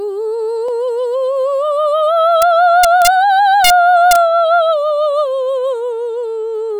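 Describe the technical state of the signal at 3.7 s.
At about 3.64 to 3.70 s the music's level ran roughly 2 dB past the largest value the integer format can hold, and instead of being limited the samples wrapped around to the opposite sign. This integer overflow turns the peaks into a violent crack, far harsher than ordinary clipping.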